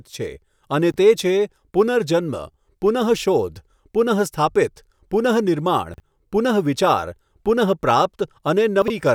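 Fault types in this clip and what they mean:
chunks out of order: a 20 ms chunk was delivered one to three chunks late, so speech briefly jumbles at the hard joins.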